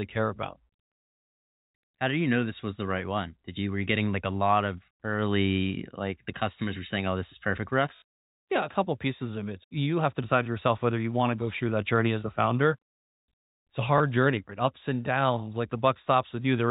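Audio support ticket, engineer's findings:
Stutter at 7.96 to 8.02 s and a small blip at 13.98 s. Packet loss with last packet repeated: receiver replays 20 ms chunks, so a 50 Hz buzz across the 60 ms gap, over the narrowband G.711 telephone audio.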